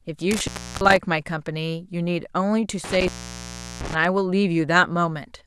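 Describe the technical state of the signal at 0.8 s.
At 0.8 s you're inside an intermittent contact fault running from about 0.31 to 0.97 s. A loose plug or cable is briefly losing connection, so the speech drops out for stretches totalling around 0.34 s, with crackle where the contact breaks and remakes and faint hiss in the gaps.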